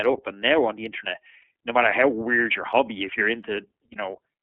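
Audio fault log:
Throughout: iLBC codec. The speech is confined to a narrow telephone band of roughly 300 Hz to 3.4 kHz, so it lacks low body and high air. The codec rebuilds each 30 ms frame's excitation independently, leaving a plainly audible rough, slightly synthetic edge on the voice. The frame length and coarseness fit iLBC's 13.33 kbps mode.
1.41–1.44 s and 3.92–3.97 s: lost iLBC frames. Each gap spans about 30 ms, consistent with a single lost frame. The decoder fills it by repeating the last pitch cycle blended with noise, heard as a brief held, faintly buzzy vowel where the speech should move on. Because iLBC frames do not depend on earlier ones, the speech returns to normal almost at once after each gap.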